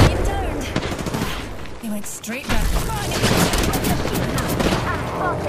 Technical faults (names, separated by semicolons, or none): damaged data in a compressed stream